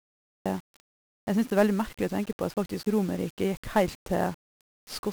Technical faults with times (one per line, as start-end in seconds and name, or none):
0.00-5.12 1-bit DFPWM compression
0.00-0.46 cut-off start